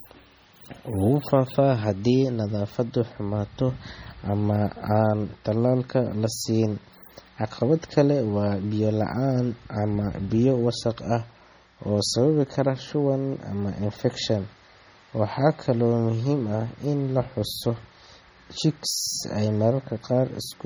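Throughout the speech, heavy swirly, watery artefacts and dulled treble sound like MP3 compression, likely at a very low bitrate near 32 kbps.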